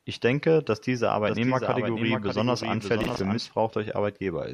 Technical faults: doubled audio track; processor overload crackle

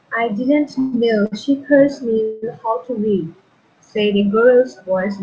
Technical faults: call audio freeze; short stall from a late packet

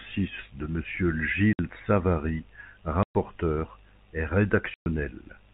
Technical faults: packet loss filled with silence

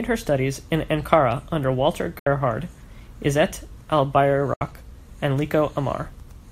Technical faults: Bluetooth dropout

